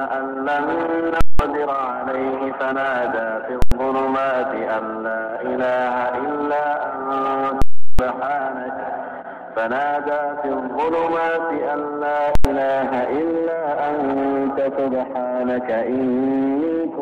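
Four bursts of invalid numbers at full scale, at 1.21–1.39 s, 3.62–3.72 s, 7.62–7.99 s and 12.35–12.45 s, where a calculation's infinite or invalid results were clamped to the rails. Each is a loud pop at onset and release with silence between. The waveform shows flat-topped blocks sitting far beyond the audio's peaks, and the spectrogram shows broadband vertical lines at each edge, with lengths that fit 4096- to 16384-sample processing blocks.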